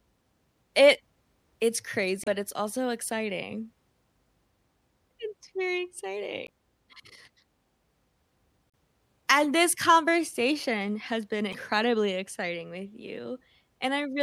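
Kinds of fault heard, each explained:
Damaged data in a compressed stream: corrupted bytes make the decoder misread frames and lose sync, causing brief glitches in the speech at 2.24, 6.47, 8.70 and 11.50 s, each 20 to 45 ms long. Spectrograms show short broadband blocky smears, and waveforms show abrupt discontinuities.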